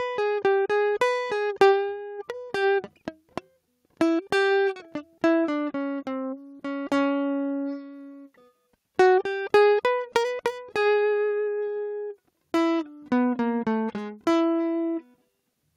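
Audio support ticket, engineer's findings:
No faults found in the music recording. Nothing audible points to a problem in any component of the chain.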